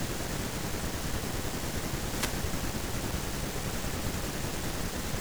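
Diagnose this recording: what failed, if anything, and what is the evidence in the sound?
The wireless link dropped out briefly: there's a wireless microphone noise hit from 2.13 to 2.32 s, a fifth-of-a-second swish of static over the speech. That's the analogue FM radio path fading as reflected signals cancel, letting receiver noise rise and smother the voice.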